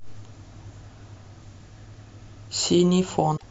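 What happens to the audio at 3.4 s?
From 3.33 to 3.43 s, roughly a tenth of a second, the speech is broken by damaged data in a compressed stream. Some of the encoded bytes at that point are corrupt, so the decoder misreads those frames, loses sync and hunts for the next valid frame header, producing a short squawk or blip in place of the speech. On a spectrogram this shows as a brief patch of smeared energy unrelated to the surrounding harmonics, with an abrupt step in the waveform at each edge.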